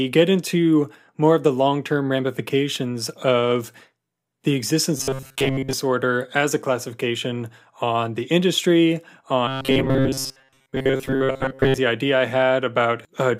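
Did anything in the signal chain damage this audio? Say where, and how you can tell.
Yes. At 4.97–5.73 s and 9.48–11.79 s (before "idea I"), speech becomes a rigid 133 Hz buzz: robotic sound from repeated short buffers, likely a starved driver buffer looping 7.5 ms.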